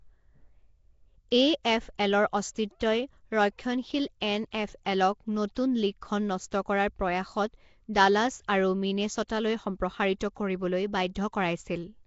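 From start to finish the speech carries a rough, hissy halo and a smeared, underwater quality, with plainly audible damage throughout. The likely cause is Nellymoser compression, the old Flash microphone codec, at a rate that points to about 32 kbps. It codes short blocks with very few bits, and weak bands get noise instead of signal. A spectrogram shows a hard ceiling at 7.7 kHz and grainy, blocky noise patches between the harmonics.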